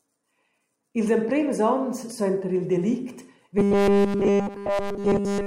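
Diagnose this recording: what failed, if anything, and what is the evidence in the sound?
Robotic sound from repeated short buffers after "suenter il delict", 3.58 s to the end: a rigid 200 Hz buzz, likely from a buffer stage repeating 5 ms blocks. Its fixed pitch sets it apart from wandering codec warble.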